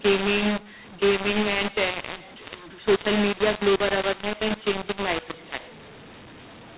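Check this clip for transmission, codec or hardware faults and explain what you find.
One fault runs through the whole speech recording, carried over a G.711 telephone link whose band stops at 4 kHz.

A mu-law and A-law mix-up is present throughout: the audio was encoded with A-law but decoded as mu-law, so each 8-bit code maps to the wrong level. Loud and soft samples come out rescaled unevenly, the speech sounds harsh and distorted, and pauses fill with raised noise.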